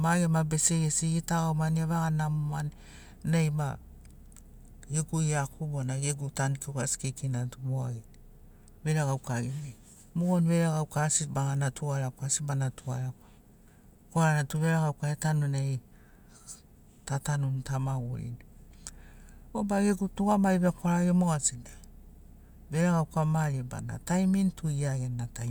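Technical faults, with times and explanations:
No technical faults are audible anywhere in the speech.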